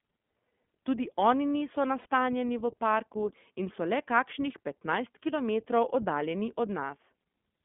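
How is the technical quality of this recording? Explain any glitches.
The recording is narrowband speech with clearly audible codec damage throughout and one short dropout.

Across the whole clip the sound has the character of the iLBC codec. The spectrogram shows energy confined to roughly 200 Hz to 3.5 kHz, with nothing above 4 kHz. iLBC codes the excitation of each 20 ms frame independently, and the coding damage is plainly audible: the speech is intelligible but rough and slightly synthetic. The sound fits a bitrate of about 15.2 kbps.

From 2.00 to 2.06 s, between "oni niso" and "v parku in so", there is a 60 ms stretch of lost iLBC frames, which fits three consecutive 20 ms frames going missing. The decoder conceals the gap by repeating the last pitch cycle blended with noise, so it sounds like a brief held, buzzy vowel. On a spectrogram it shows as flat, repeated harmonic bands. 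In the waveform it appears as a periodic stretch with softened envelope detail. Because each frame stands alone, normal speech resumes immediately afterwards.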